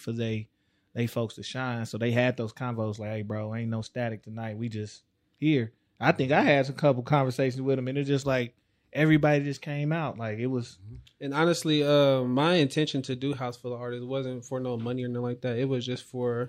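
Listening through the speech recording, nothing stood out as a technical problem at any point.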